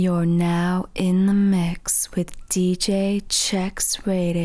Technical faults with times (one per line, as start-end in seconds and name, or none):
none